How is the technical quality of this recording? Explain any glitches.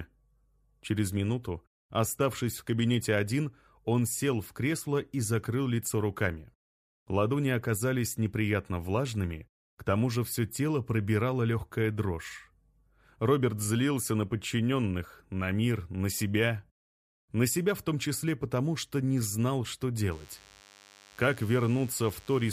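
One fault stands out: a DECT cordless phone buzz from 20.12 s to the end at 22.53 s. A nearby DECT handset or base transmits radio bursts 100 times per second, and the audio circuitry rectifies them into a thin, rasping 100 Hz buzz rich in harmonics, roughly 30 dB below the main sound. Unlike smooth mains hum, it sounds gritty and steady, and it appears only near the end rather than running throughout.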